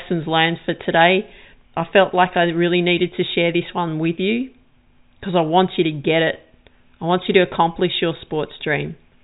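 No technical faults are audible.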